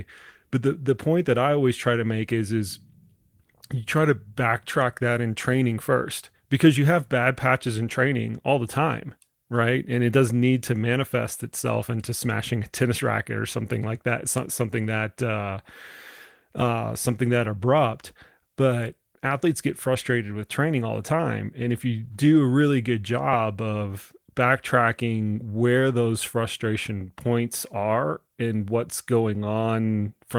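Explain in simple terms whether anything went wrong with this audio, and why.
Nothing went wrong with this recording, and there is no fault to point to anywhere in it. The speech has passed through Opus voice compression, which leaves only a light trace on the sound while keeping both the low and the high end of the voice.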